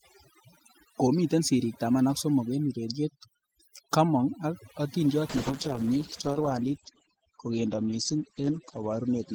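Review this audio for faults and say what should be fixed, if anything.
Overdone noise removal runs through the whole recording. The suppressor is set so aggressively that bands near its noise estimate are pulled down or gated out, taking quiet parts of the voice with them. The result is a lowered background that breaks up into twinkling specks. Lower the reduction strength or use a gentler suppressor so residual noise stays smooth and the speech keeps its low-level detail.

A call bitrate drop starts at 5.3 s, right after "kamong ak atindiot", and lasts to the end. The encoder falls from 40 to 11 kbps and stays at its lowest for about 3.2 s. Audio bandwidth narrows from 20 kHz to 8 kHz, so the voice turns muffled and coarse. Keep enough bandwidth headroom on the link, or set a higher minimum bitrate, so the estimate cannot push the encoder this low.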